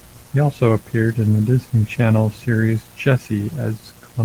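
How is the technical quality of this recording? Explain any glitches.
The recording carries one clear fault, a mains buzz that runs under the speech for the whole clip. The speech itself shows only light coding damage from Opus voice compression.

Mains buzz, present throughout: sharp switching spikes from a dimmer, rectifier or unshielded connection leak in twice per 60 Hz cycle, spreading harmonics up to several kilohertz. Sitting roughly 30 dB below the speech, it comes across as a steady, raspy buzz.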